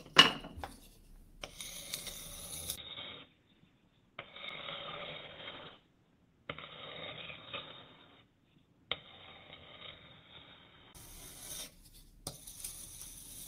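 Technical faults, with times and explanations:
2.76–10.95 s, input switched to a poorer device: The recording input likely changed mid-clip to a lower-grade microphone or a headset's call profile. After a brief gap of about 20 ms at the switch, the audio loses everything above 3.8 kHz, turning dull and boxy. It also drops a few decibels in level and gains faint new background noise well beneath the signal. At 10.95 s the fuller, brighter sound returns.
3.37–7.13 s, call bitrate drop: The call's bandwidth estimate fell, so the encoder was forced to spend far fewer bits. The coarseness fits a drop from 32 kbps to 13 kbps, held at its lowest for about 2.7 s. Starved of bits, the codec quantises the audio crudely, so the already narrowed sound turns rough and watery. Its texture recovers once the rate climbs back at 7.13 s.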